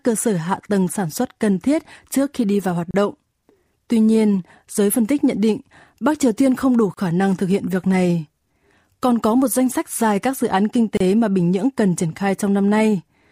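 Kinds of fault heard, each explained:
Gap at a join of encoded pieces: encoded segments were joined with the encoder's start delay and end padding left in, so the speech drops out for 32 ms every 4 s. The waveform shows flat notches, and the spectrogram shows thin blank vertical bands with slightly smeared edges.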